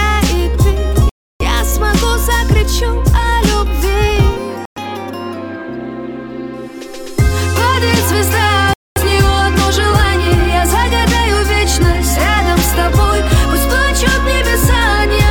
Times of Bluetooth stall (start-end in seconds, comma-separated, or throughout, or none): 1.09-1.42, 4.65-4.78, 8.73-8.98